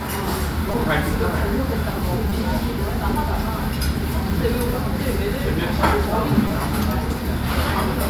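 Repeated buffer faults occur at 0.72, 2.30, 4.30 and 6.48 s in this everyday-sound recording. Each time, fresh audio failed to reach the output in time, so the device replayed its last block instead. The blocks are so short, consistent with a 5 ms buffer, that the repeats fuse into a brief buzzy click rather than an audible stutter. The events at 0.72, 2.30 and 6.48 s last about 20 ms. The one at 4.30 s is a single tick of about 5 ms.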